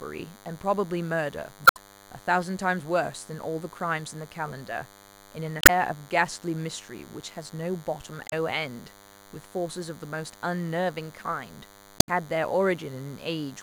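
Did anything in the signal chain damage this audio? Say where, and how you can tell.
Yes. The analogue wiring picks up DECT cordless phone buzz throughout: a thin 100 Hz buzz with harmonics, roughly 20 dB below the speech, from rectified 10 ms radio bursts.

Damaged data in the compressed stream causes brief disruptions at 1.64–1.77, 5.59–5.70, 8.27–8.33 and 11.97–12.09 s. At each point the decoder misreads the corrupted frames and hunts for the next header.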